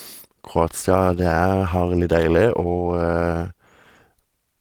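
No technical faults can be heard anywhere in this speech recording.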